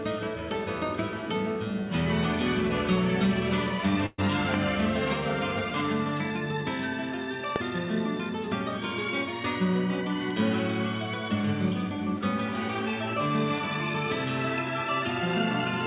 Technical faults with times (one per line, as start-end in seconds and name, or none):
4.06-4.20 burst of packet loss
4.54-4.56 loud pop
7.56-7.58 loud pop